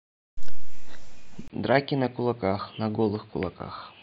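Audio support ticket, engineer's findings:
Speech goes dull and boxy from 1.48 s to the end, nothing above about 4.8 kHz, level drops roughly 10 dB, new noise floor well below signal, 20 ms gap at the switch. Likely the input switched to a poorer device, e.g. a narrowband headset profile taking over mid-recording.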